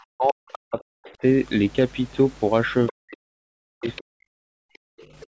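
Speech suppressed in double talk, 0.0 to 1.23 s: the talker's speech dips, at its deepest about 40 dB, for roughly a second. This is likely the echo canceller ducking both voices while the far side also spoke. Other side's voice leaking through, at 0.27 to 0.33 s and 1.05 to 1.11 s: brief scraps of the far voice, about 25 and 30 dB below the speech, likely survive incomplete echo cancellation. Another leak at 2.87 to 2.93 s is louder, about 15 dB down. Speech suppressed in double talk returns from 2.91 to 4.45 s, again dropping up to about 40 dB across roughly one and a half seconds. Inside it, at 3.88 to 4.0 s, the other side leaks through at about 20 dB below the speech. Background gated by the echo canceller, 4.73 s to the end: the room sound drops out by about 40 dB for roughly 0.3 s while loudspeaker output is present. Within that, 4.98 to 5.22 s, a faint far-side leak sits about 30 dB down. 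The call microphone processing's band limit leaves nothing above 8 kHz.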